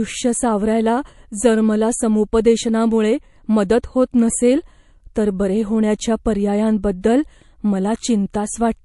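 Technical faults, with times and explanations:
Throughout: MP3 compression, likely. The speech sounds watery and swirly, with chirpy sibilants, consistent with a low bitrate around 48 kbps. The encoder drops weak frequency lines frame by frame. A spectrogram shows flickering, patchy gaps.
7.01–7.04 s: pre-echo. A hiss rises about 17 dB over 27 ms just before a sharp attack, softening it. Quantisation noise from a transform block around 48 ms long spills ahead of the onset, suggesting no switch to short blocks. The waveform shows a smeared noise ramp before the transient.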